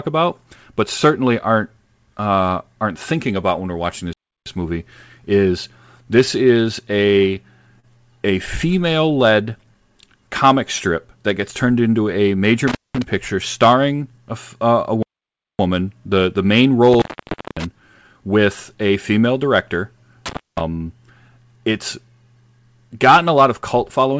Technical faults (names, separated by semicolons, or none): playback stall; short stall from a late packet; jitter buffer speed-up; intermittent contact